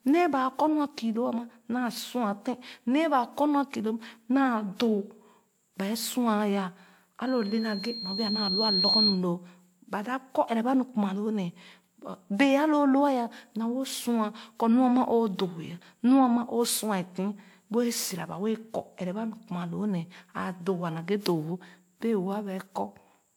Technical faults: generation loss; loudspeaker feedback squeal

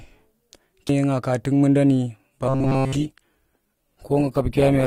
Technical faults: CD skip; adaptive stream at a lower bitrate; robotic sound from repeated short buffers

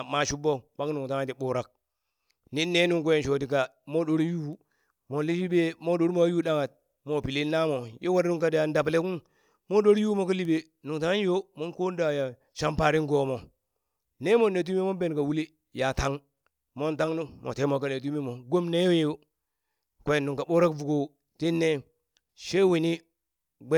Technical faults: none

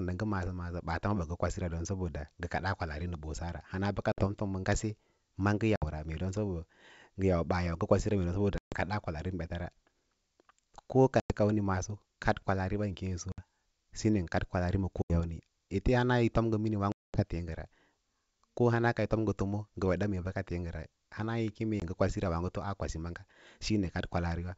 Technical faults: packet loss on an ADPCM call

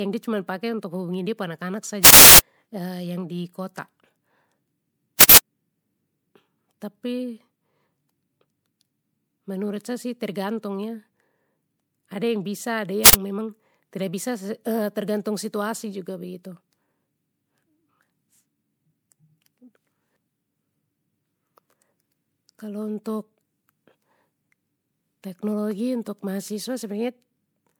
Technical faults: generation loss; uninitialised buffer

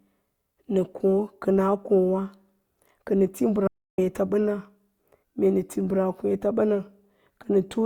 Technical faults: audio dropout to silence

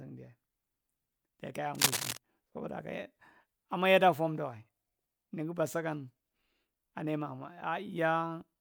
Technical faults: cable scratch noise

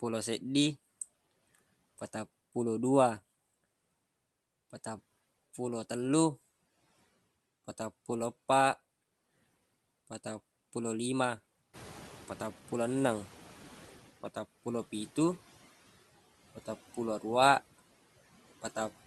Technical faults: noise suppressor catching up

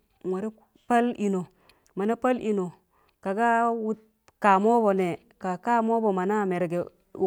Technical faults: none

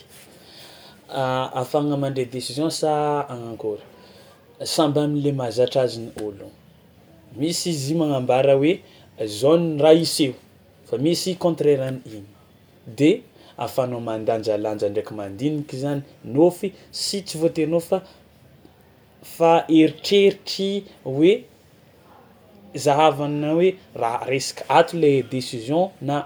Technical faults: none

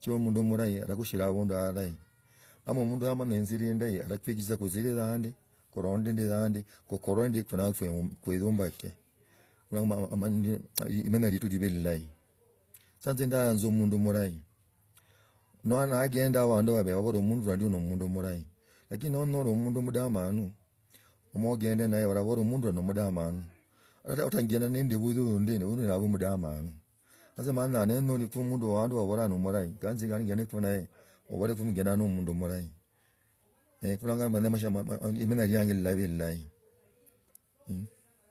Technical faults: transcoding between lossy codecs

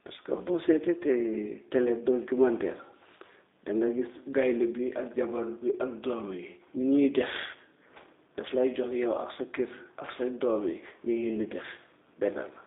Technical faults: G.729 codec

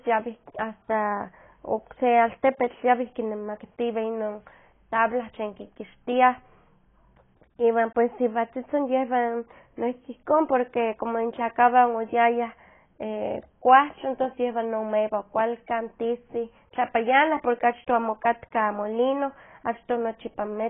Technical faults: AAC compression

